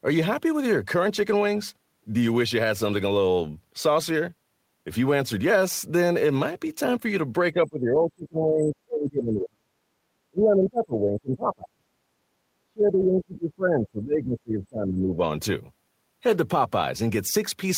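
Between 7.52 and 9.73 s, 10.31 and 11.9 s, and 12.63 and 15.2 s, the speech dips and breaks up by up to about 40 dB, leaving hollowed gaps in the waveform. This is speech suppressed in double talk, likely an echo canceller ducking the near talker.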